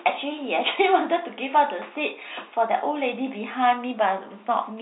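No technical faults are present.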